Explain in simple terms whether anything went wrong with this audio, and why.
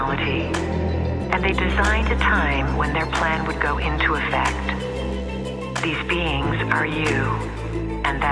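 Nothing went wrong: no technical faults turn up anywhere in the audio.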